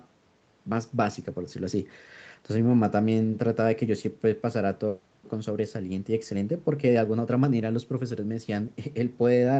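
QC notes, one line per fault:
No faults heard.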